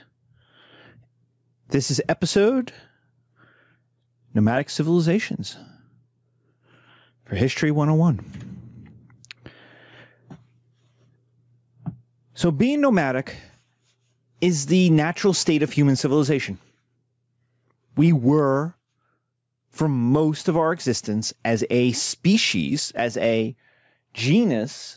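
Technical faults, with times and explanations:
Throughout, gain pumping: the level keeps swinging by around 10 dB. That pattern points to input gain set far too high, most likely with a fast limiter or compressor clamping down on every peak, so loud and quiet passages sit squashed close together, heard through a call-style microphone chain with nothing above 8 kHz.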